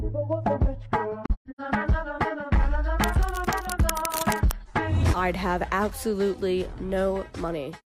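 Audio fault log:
1.25–1.61 s AAC frame loss with muting: the decoder zeroed the spectrum of lost frames. This leaves soft-edged holes totalling 256 ms, scattered over about 340 ms, with the longest around 150 ms.
3.03–4.52 s cable scratch noise: a worn cable or connector was likely moved. It adds dense, uneven scratching and rustling bursts around 10 dB below the signal.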